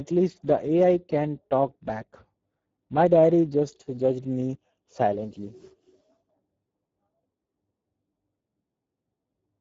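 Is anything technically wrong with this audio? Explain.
Yes. Speex codec damage runs through the whole speech clip. This CELP coder models the voice as a vocal-tract filter driven by a coded excitation signal, and here the excitation gets too few bits. The result is a plainly audible hoarse, noisy texture on the voice, consistent with a bitrate of around 10 kbps. The coder also caps the bandwidth, so there is nothing above 7.7 kHz, which dulls the top end.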